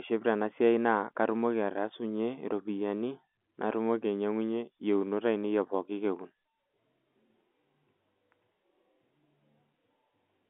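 No technical faults can be heard in the speech. It comes over G.711 telephone coding working as intended, so the sound is held to the telephone band of about 250 Hz to 3.4 kHz, with at most a faint trace of the coding itself.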